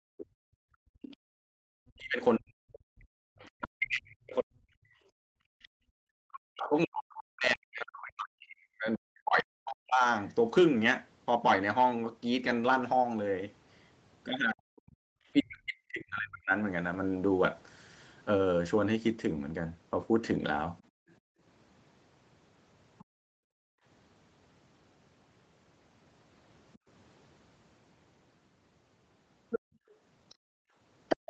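From 0.0 to 1.36 s the background is gated by the echo canceller: while the loudspeaker plays, the microphone is pulled down by about 40 dB, so the room noise vanishes for about a second. On a waveform the noise floor drops sharply, and the spectrogram darkens. The same dips return at 5.0 to 5.92 s, 20.89 to 23.84 s (about 39 dB) and from 29.59 s to the end (about 38 dB).

From 0.18 to 5.68 s a second voice sits about 20 dB under the speech, likely the other side's voice leaking through past the echo canceller. It shows as faint harmonic traces beneath the main speech. It returns at 20.8 to 23.05 s, about 30 dB down, and at 26.74 s to the end it is only about 5 dB below.

From 1.64 to 10.04 s the speech dips by up to about 40 dB and breaks into pieces, over roughly 7 s in total, likely as it is suppressed in double talk. The loudness envelope shows sudden notches, and the upper harmonics thin out in the spectrogram. 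A shorter stretch follows at 14.53 to 16.53 s.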